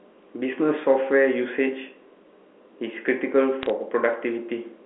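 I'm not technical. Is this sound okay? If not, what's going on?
No. From about 3.63 to 3.70 seconds, a short burst of sharp ticks and crackle sits over the speech. These are bit errors on a digital phone line: a few of the transmitted ones and zeros got flipped, and each flip changes one sample, with flips on the most important bits jolting it into a click.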